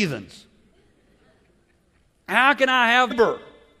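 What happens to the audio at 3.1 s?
Right around there, from 3.07 to 3.13 s, there's a short burst of damaged data in the compressed stream. The decoder hits corrupted frames, loses sync and hunts for the next valid header, so you get a quick glitch cutting into the speech.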